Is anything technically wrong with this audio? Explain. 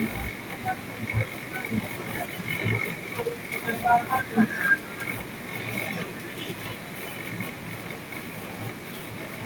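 No, nothing is technically wrong with this audio.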